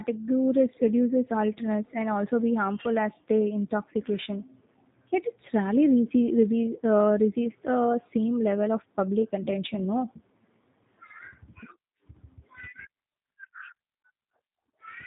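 Speech runs through G.729 coding for its whole length, and the damage is plainly audible. Nothing above 4 kHz survives, so the sound is dull and narrow. The speech is rebuilt from a filter, pitch predictor and sparse pulses. That leaves a rough, synthetic edge, which fits an 8 kbit/s G.729A stream.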